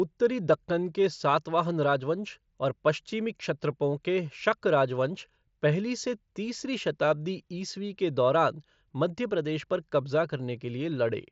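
No technical faults can be heard in this speech recording; it arrives over a working Bluetooth mSBC headset link, whose wideband coding caps the audio at about 8 kHz and adds only light grain on the louder passages.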